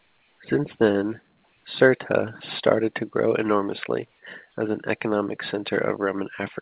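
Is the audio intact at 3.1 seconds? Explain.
Yes, the speech is intact at 3.1 s: nothing breaks or disturbs it there, and it simply carries the narrow telephone-band sound of the call path, with nothing above 4 kHz.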